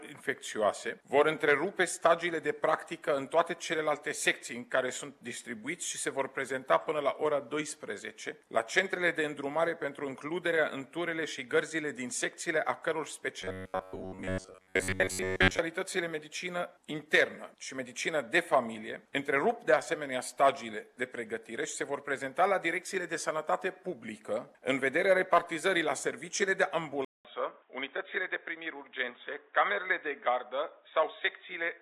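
From 13.42 s to 15.60 s the sound goes robotic, with a rigid metallic buzz sitting at about 93.8 Hz. That's likely robotic sound from repeated short buffers: fresh audio stops arriving in time, so a slice of roughly 10.7 ms keeps getting replayed to fill the gap, and its repeat rate becomes that fixed pitch. Most of the stretch is repeated material rather than real audio, so the sound only loosely follows its original shape.

Then at 27.05 s there's a 200 ms silence, and from there to the end the sound is duller and boxier. It comes back about 5 dB quieter, with a new noise floor sitting around 45 dB below it. That points to the input switched to a poorer device, likely a different microphone or a headset in its call profile, whose narrower band, own tone and own noise replace the original source.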